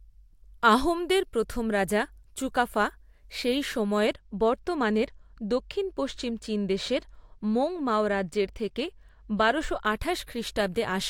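From 4.07 s to 9.85 s, just after "প্রথম রাজা চুকাফা সেই", the speech shows channel delay (comb filtering). One channel lags the other by only a couple of samples before they are summed. The first notch sits around 10 kHz, so the top end sounds dull.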